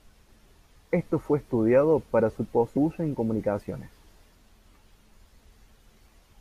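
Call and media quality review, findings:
Compressed frames skipped, 2.76 s and 5.61 s. Speech jumps forward with a short smeared blip at each join, not a hard click. Probable component: decoder or file. Whole frames missing or rejected as damaged. Step size fits a 26.1 ms frame, consistent with a 1152-sample frame at 44.1 kHz. At 2.76 s, about ten frames gone, roughly 300 ms lost. At 5.61 s, about three frames, roughly 70 ms lost. Overlapping neighbours blur each seam.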